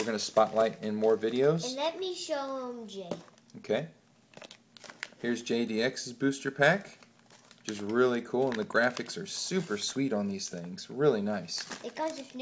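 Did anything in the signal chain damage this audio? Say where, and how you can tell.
No, nothing in the signal chain audibly damaged this audio; the signal stays continuous and stable throughout, with nothing that points to a problem at any stage.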